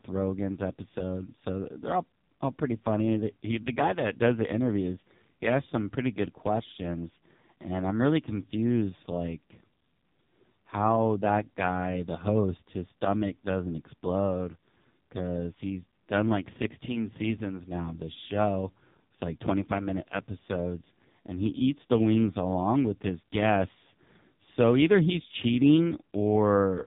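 Thin, boxed-in speech runs through the whole recording, buzzy and synthetic, with nothing above about 3.8 kHz. This is the AMR narrowband mobile codec at work. AMR-NB samples at 8 kHz and rebuilds the voice from a vocal-tract model fed by a handful of pulses per subframe, so the upper band is simply gone. The heavy, robotic coarseness points to one of its lowest modes, which fits a rate near 5.15 kbps.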